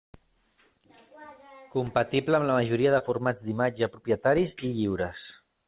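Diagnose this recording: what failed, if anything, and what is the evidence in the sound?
A network hiccup, basically short concealed packet loss. Right after "amb la majoria", from 2.98 to 3.02 s, there's a brief smeared wobble before "formats d'imatge propietaris". About 20 ms arrived too late, and the receiver's concealment stretched the preceding sound across the gap before blending back, all inside audio capped at 4 kHz, which fits a G.711 mu-law call path.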